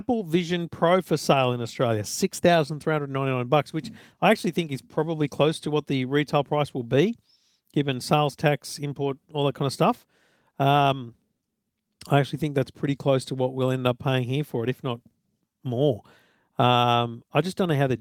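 No technical faults can be heard anywhere in the recording; the signal holds steady throughout.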